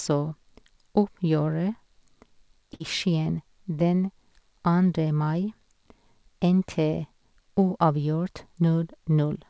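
At 2.74 s the speech hits a burst of packet loss lasting until 2.82 s. The receiver stretches the last sound for about 60 ms while fading it, heard as a brief held buzz or hiss. Speech resumes with roughly 60 ms missing. The call path's bandwidth stops near 8 kHz, which fits G.722.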